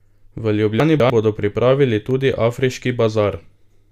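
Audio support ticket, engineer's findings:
Chunks out of order, 0.8–1.1 s, just before "bodo pripravili tudi afriški": garbled speech. One 100 ms chunk played two chunks late. Buffer reassembly fault; hard joins at each seam.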